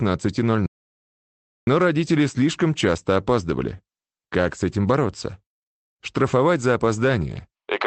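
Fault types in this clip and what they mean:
Audio dropout to silence: the input was likely lost through a disconnect, failed link or mute while recording kept writing silence. The sound cuts out at 0.66 s and returns at 1.67 s, leaving one second of total silence without room tone.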